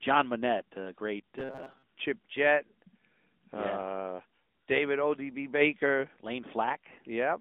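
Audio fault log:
Throughout: AMR narrowband mobile codec. The whole clip sounds like a phone call. Nothing gets through above about 4 kHz, and the band sits roughly between 200 Hz and 3.6 kHz, so the speech is thin and boxy with no air on top. The codec damage is easy to hear: a buzzy, synthetic edge, because the codec models the voice from a handful of pulses per frame. That grain fits AMR-NB running at around 10.2 kbps.
1.39 to 1.84 s: robotic sound from repeated short buffers. Right after "a great", the voice turns into a rigid metallic drone for close to half a second. A steady 133 Hz buzz sits on top, and the speech follows the words only loosely. This is likely the playback running short of fresh audio and looping the last chunk, about 7.5 ms each time. That loop length sets the fixed pitch, and roughly half of this stretch is repeated material rather than new audio.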